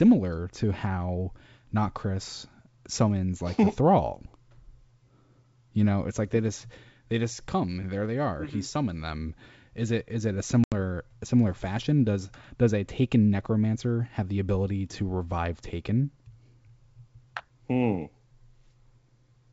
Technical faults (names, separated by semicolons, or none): packet loss on an ADPCM call